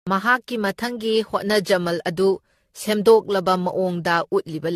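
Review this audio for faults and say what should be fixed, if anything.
Generation loss is present throughout the speech: swirly, hollow smearing, blurred consonant attacks and nothing above 14.1 kHz. This is likely from around ten successive re-encodes, with a character that fits AAC-LC at about 64 kbit/s. Unlike a single low-bitrate encode, the damage sounds heavier than that rate alone would produce. To prevent it, work from the original source and apply lossy encoding only once, at final export.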